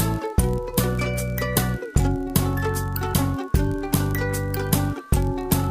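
A recording of sounds with a block size mismatch (padded) running through the whole clip. One stage writes slightly shorter blocks than the next reads, and the missing tail of each block is filled with zeros. The repeating gaps produce a steady buzz at 43.1 Hz, which fits a 1024-sample read size. Because the padding is so small, playback runs at 0.999 times normal speed, with pitch essentially unchanged.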